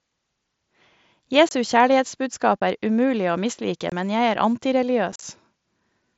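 Unconcealed Bluetooth headset packet loss drops voice packets between headset and phone with nothing filled in, leaving abrupt holes in the speech at 1.49–1.51 s, 2.60 s and 3.90–3.92 s. At 5.12–5.23 s, about 60 ms is lost in scattered gaps, the longest about 38 ms, giving a brief chopped crackle over the mSBC link's light wideband grain.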